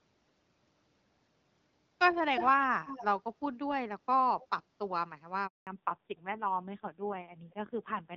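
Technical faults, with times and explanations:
2.34–2.66 s, 2.86–3.05 s and 4.40–4.47 s, echo leak: the far end is likely playing the call on a loudspeaker, and its echo canceller is letting part of what its microphone picks up back into the line. The result is a delayed second copy of the voice trailing the original by about 0.29 s each time. It is strong at first, only a few dB under the direct speech, then weaker, and by 4.4 s it is a faint scrap well down in level.
5.47–5.67 s, handover gap: the call is passed from one network to another, and no speech frames arrive while the switch happens. The voice fades out within a few tens of milliseconds and there is 200 ms of silence until the new link starts carrying audio. Whatever was said in that window is lost rather than delayed, so the speech jumps ahead when it resumes.
5.67 s to the end, fallback to narrowband: after the handover the call drops out of HD Voice, where the wideband codec gave light, clear speech, into an older narrowband codec. 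Nothing above 4 kHz survives from this point, so sibilants and breath lose their crispness and the voice turns muffled. There is also a rough, buzzy grain, which fits a low-rate narrowband mode around 5.9 kbit/s.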